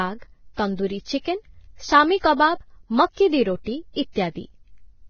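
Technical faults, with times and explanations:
Throughout, Vorbis compression: the speech sounds grainy and hissy, with nothing above 6.5 kHz. Unlike a plain low-pass filter, the remaining treble is rough noise rather than clean, likely from heavy Vorbis coding near 18 kbps that replaces fine detail with noise.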